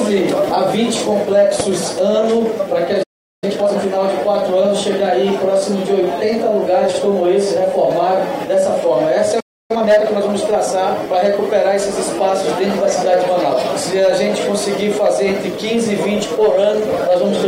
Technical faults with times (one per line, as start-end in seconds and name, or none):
1.60-1.62 loud pop
3.03-3.44 playback stall
3.44-3.82 time-compressed catch-up
6.89-6.99 frames out of order
8.17-8.22 frames out of order
9.40-9.71 playback stall
9.71-10.29 time-compressed catch-up